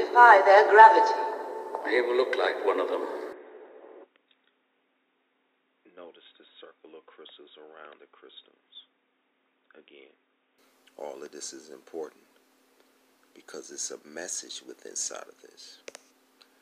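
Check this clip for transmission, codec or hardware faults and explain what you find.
One fault is present. From 3.32 s to 10.58 s the sound turns dull and boxy, likely because the input switched to a poorer device whose band stops at 3.8 kHz. Level drops about 5 dB, with new noise about 55 dB below, and nothing is lost at either switch. A spectrogram shows a flat ceiling at 3.8 kHz across that span, and the waveform steps down in height.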